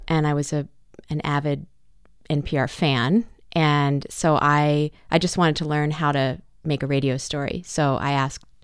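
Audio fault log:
No technical faults can be heard anywhere in the signal.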